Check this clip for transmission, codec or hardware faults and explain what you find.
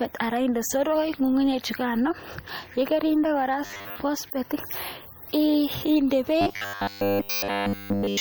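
Two faults are present: codec damage across the whole recording and two bursts of robotic buzzing.

Throughout the speech there is plainly audible MP3 compression, likely at a low bitrate around 64 kbps. Weak frequency components switch on and off between frames, giving a watery, swirly texture, metallic chirping on s sounds, and smeared consonant onsets.

From 3.66 to 3.96 s, and again from 6.41 s to the end at about 8.20 s, there is robotic sound from repeated short buffers. The likely cause is audio arriving too late, so the software loops the last stretch in place of fresh material. The buzz sits at 100 Hz, which fits a repeated segment about 10 ms long. In the first burst most of the audio is replaced, and in the second it is replaced entirely. The result is a rigid, metallic drone that only loosely tracks the speech.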